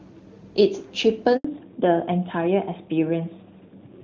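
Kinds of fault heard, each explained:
Handover gap: while the call is passed from one network to another, no speech frames get through, so the voice dies away at about 1.37 s and stays silent for 80 ms. A waveform shows a brief flat stretch. A spectrogram shows a thin, fully blank vertical band.
Fallback to narrowband: once the call resumes at about 1.45 s it has dropped from wideband HD Voice, which fits AMR-WB at 23.85 kbit/s, to a narrowband codec, which fits AMR-NB at 12.2 kbit/s. The speech sounds duller and boxier. On a spectrogram everything above 4 kHz is empty from there to the end.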